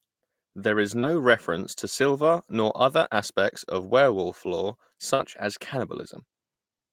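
A brief smear lands at 0.99 to 1.06 s, just before "reference to silver nor", and again at 5.15 to 5.22 s, right after "aspects of werewolf lore". Both are short concealed packet loss. Roughly 40 ms of the call arrived too late to decode each time, so the receiver extended the preceding sound to bridge the hole and then blended back into the real signal, leaving a wobble where the original detail is gone.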